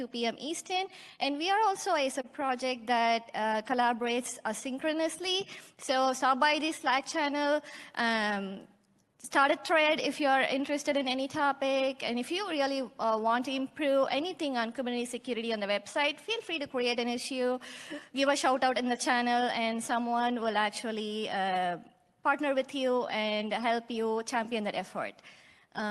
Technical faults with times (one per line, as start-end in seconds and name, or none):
0.00-25.90 clock drift between sender and receiver
0.65-25.67 repeated timing corrections
0.68-6.84 scattered short gaps